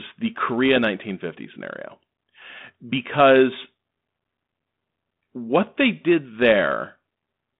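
Speech, with nothing technically wrong to report.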